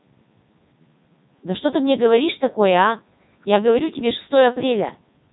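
Throughout, heavy Codec 2 vocoder damage resynthesises the speech from pitch and envelope, making it buzzy and robotic, with nothing above 3.8 kHz.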